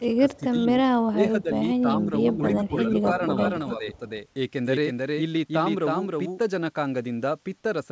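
Speech suppressed in double talk comes first, in five spells: 0.0 to 0.67 s, 1.11 to 1.63 s, 1.82 to 2.12 s, 2.57 to 3.06 s and 3.68 to 4.0 s. The speech dips and thins in patches. The first two drops are deep, roughly 15 dB. The later three are gentler, around 5 dB. The likely cause is an echo canceller facing talk from both ends and turning everything down.

An echo leak follows from 3.95 to 3.99 s. A very faint copy of the speech returns about 316 ms late, far below the speech itself. It likely comes from a loudspeaker's echo that the far end's canceller did not fully remove.

Comfort noise in place of the background appears from 4.26 to 4.36 s. For 100 ms the real background gives way to a flat, featureless hiss, about 2 dB quieter. The sender likely paused transmission during silence, and the receiver filled the gap with synthetic noise. The call audio carries nothing above 8 kHz, which fits a G.722 wideband codec.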